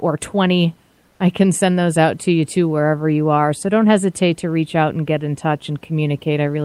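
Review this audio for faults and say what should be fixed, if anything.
There's one spot to fix: comfort noise in place of the background from 1.07 to 1.19 s, right before "I can send those". For about 120 ms the real room noise, sitting roughly 42 dB under the loud parts, gets swapped for a flat, featureless hiss about 2 dB quieter. The likely cause is the sender's discontinuous transmission (Opus DTX) cutting out during the pause and the receiver filling the gap with synthetic noise. Turning off DTX on the sending side, or at least lowering its voice-detection threshold, should keep the genuine background going through short pauses.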